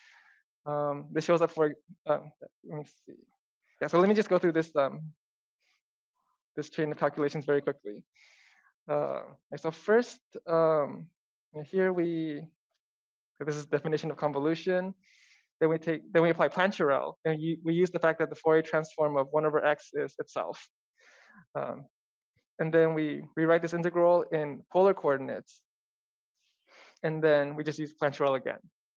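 Nothing is technically wrong with the clip, and there are no times or causes to report.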